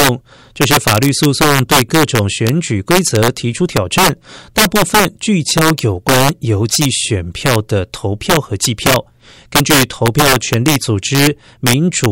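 Violent cracks burst from the loudest moments of this speech clip throughout, an integer overflow: about 7 dB of excess gain makes peaks wrap to the opposite sign instead of clipping, on roughly one to two percent of samples.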